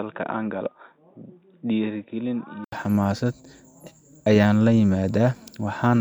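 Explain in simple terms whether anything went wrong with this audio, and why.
From the start until about 2.72 s, the speech sounds dull and boxy, noticeably quieter, and carries a faint background hiss. Nothing above about 3.8 kHz gets through, so the crisp upper part of the sound is missing. At 2.72 s there is a brief gap of about 80 ms, after which the sound opens up. That pattern points to an input switched to a poorer device, likely a headset's call mode or a weaker microphone, before the system returned to the better one.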